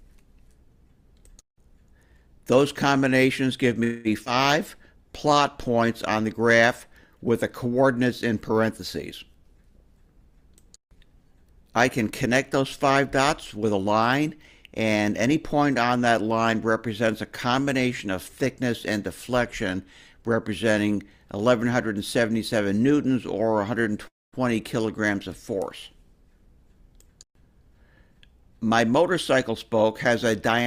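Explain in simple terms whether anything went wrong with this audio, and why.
Call audio freeze at 3.83 s and 24.07 s: the sound stalls, filled by a stretched-out buzz for about 0.21 s, then for about 0.25 s ending mostly silent. Likely delayed packets emptied the buffer, so playback waited and resumed where it stopped.

Skip ahead at 4.25 s: about 70 ms of audio was dropped while later sound was already waiting, so playback jumps forward almost without a gap.

Jitter buffer slow-down from 4.75 to 5.87 s: running low, the receiver repeated tiny pieces, adding 67 ms, so the sound plays at 95% speed with unchanged pitch.

Jitter buffer speed-up from 9.43 to 13.86 s at 105% and 26.14 to 30.61 s at 104%: holding too much audio, the receiver trimmed roughly 0.2 s each time, so the sound feels hurried.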